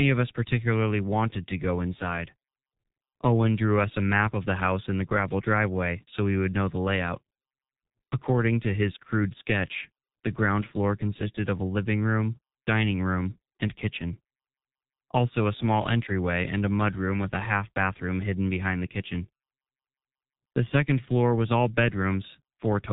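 Speech coded throughout with the G.723.1 codec, heavily damaged: nothing passes above 3.8 kHz, so the sound is muffled, and the slowly updated voice model over 30 ms frames leaves it hoarse with smeared consonants, consistent with a bitrate around 6 kbit/s.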